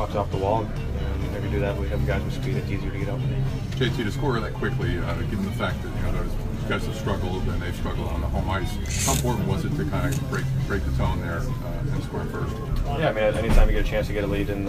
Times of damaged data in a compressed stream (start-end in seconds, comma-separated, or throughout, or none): none